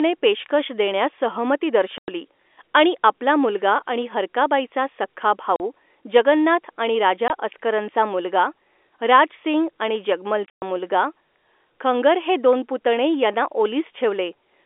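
Packet loss filled with silence cuts the speech at 1.98 to 2.08 s, 5.56 to 5.60 s, 7.28 to 7.30 s, and 10.46 to 10.62 s. Each hole drops to dead silence with hard edges. The gaps come in 20 ms steps, which fits 20 ms packets.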